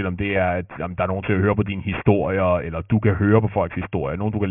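Aliasing runs through the whole speech clip. The audio was downsampled without an adequate anti-alias filter, and the band limit at 3 kHz fits a drop from 48 kHz to a 6 kHz rate. Everything above 3 kHz folded back below it rather than being removed, landing on unrelated frequencies roughly 15 dB under the wanted signal. Sibilants come out gritty and metallic, and the spectrum stays dense right up to the 3 kHz edge.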